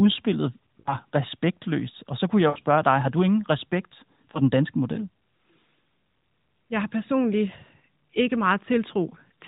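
Lost AMR speech frames break this speech four times: at 0.80 to 0.95 s, just before "respektløst og så kunne"; at 2.50 to 2.58 s, between "og så kunne jeg" and "dig har du ingen"; at 4.32 to 4.41 s, after "har du ingen respekt"; and at 9.10 to 9.15 s. The narrowband AMR decoder, with nothing above 4 kHz, filled each gap by repeating its last pitch and vocal tract settings at falling gain. The first two sound drawn out and fade, fitting about three 20 ms frames; the last two are brief dips or warbles, fitting one frame. On a spectrogram the harmonics smear flat and dim; the waveform shows a decaying, repetitive envelope.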